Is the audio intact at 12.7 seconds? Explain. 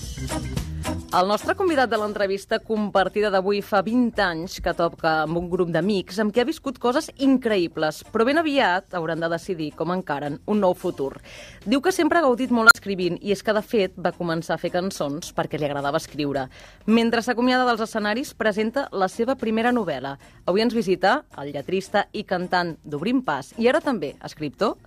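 No. From 12.66 to 12.75 s an unstable filter takes over. A recursive filter with bad coefficients feeds its own output back with gain above one, so a tone around 1.5 kHz swells to clipping in about 53 ms. The arithmetic then overflows and the output drops to about 40 ms of silence until the filter resets. Acoustic feedback howl builds more slowly and rings on, but this squeal ends abruptly in a dead gap.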